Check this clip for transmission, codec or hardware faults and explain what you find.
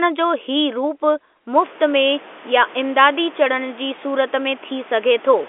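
Nothing found in transmission, codec or hardware: the speech sits in the 300 Hz to 3.5 kHz telephone band of G.711 A-law at 64 kbps, and the room noise that comes up by about 25 dB roughly a second and a half in, settling about 24 dB below the speech, belongs to the recording itself.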